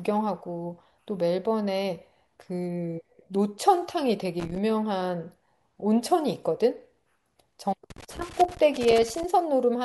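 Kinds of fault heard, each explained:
Loose connector crackle: A worn or dirty contact keeps making and breaking as it moves, chopping the speech signal. Here it comes as irregular bursts of crackle and scratching. A short one sits at 4.40 to 4.58 s. A longer one runs from 7.90 to 9.24 s.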